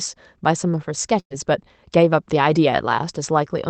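At 1.19 s a burst of packet loss cuts about 120 ms from the speech stream. The receiver extends the last sound as a fading buzz or hiss for about 110 ms, then briefly goes silent, and speech resumes at 1.33 s with that part missing.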